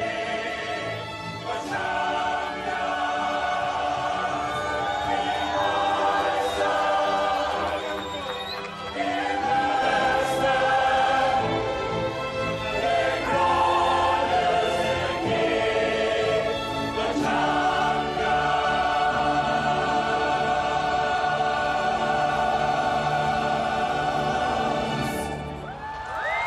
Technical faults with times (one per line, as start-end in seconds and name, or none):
0.00-9.82 channel delay (comb filtering)